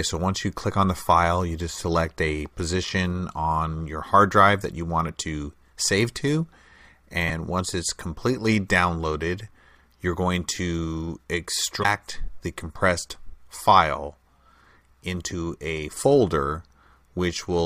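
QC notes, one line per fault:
7.25–7.31 s and 11.80–11.85 s: damaged data in a compressed stream. Each is a burst of about 55 ms where corrupted bytes make the decoder misread the frames, lose sync and hunt for the next frame header, heard as a short chirp or blip.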